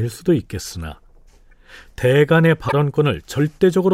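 Damaged compressed frames were passed to the decoder and played as if intact, which is a corrupt frame decoded fault. With flipped bits, the decoder misreads gains and spectral codes, so energy lands at the wrong frequencies for as long as each bad frame lasts. At 1.51 s a couple of frames give a brief squeaky blip in the speech. From 2.66 to 2.73 s a few consecutive frames produce a longer chirp-like burst of noise.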